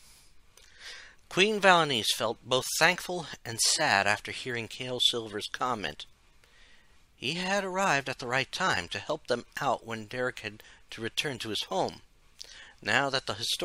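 At 8.76 s a block of digital silence of about 2.67 ms, which fits a 128-sample buffer left unfilled, cuts in abruptly and is heard as a sharp tick.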